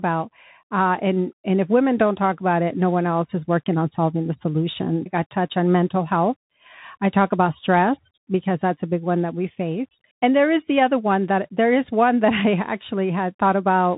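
From start to finish, the speech carries plainly audible Bluetooth CVSD headset codec damage. Nothing reaches above about 3.8 kHz, so the sound is narrowband and boxy. Because the encoder sends only one up-or-down bit per sample, consistent with a 64 kbps stream, its adapting step lags behind loud high content. S sounds turn scratchy and a granular hiss sits underneath. That grit separates it from a clean low-pass, and the 3.8 kHz ceiling rules out wideband mSBC.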